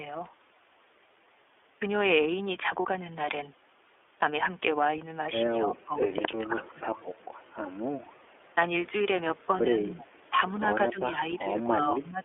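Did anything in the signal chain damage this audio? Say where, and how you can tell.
Yes. The codec stage damaged the whole clip. The speech is band-limited to roughly 300 Hz to 3.5 kHz, with nothing above. It has the slightly rough, synthetic edge of iLBC coding, and the damage is plainly audible. The texture fits the 13.33 kbps mode with 30 ms frames. Each frame's excitation is coded on its own, and the narrow band throws away the upper spectrum.

The network stage lost one iLBC frame at 2.82 to 2.85 s. The gap is about 30 ms long. It sounds like a brief held, faintly buzzy vowel rather than a click or dropout. The decoder filled the missing frame by repeating the last pitch cycle mixed with noise. Because iLBC frames stand alone, the speech recovers cleanly at the very next frame.

Call processing pulls the talker's level down at five points. The drops are about 20 dB at 5.74 to 5.98 s and again at 6.14 to 6.87 s. 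They are about 5 dB at 8.87 to 8.92 s and 10.30 to 10.35 s, and about 10 dB from 10.75 s to 12.23 s. The speech dips or thins in pieces rather than fading smoothly. This is likely speech suppressed in double talk: an echo canceller mistook the talker for loudspeaker echo and attenuated it.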